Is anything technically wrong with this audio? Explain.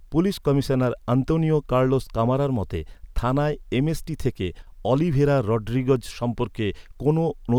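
Yes, there are two faults in this speech. At 0.83 s, just before "আন্তোনিও কার্লোস কামারার মতে", a sharp snap sits on top of the speech. This is an electrical switching spike, likely from a nearby switch, motor or static discharge arcing briefly and coupling into the audio line.

From 4.62 to 4.67 s, just before "অলিভেরা রড্রিগেজ", the speech abruptly dips by about 6 dB for 50 ms and then recovers. This is one channel dropping out, likely a momentary loss of one stereo side, which halves the shared content once the channels are summed to mono.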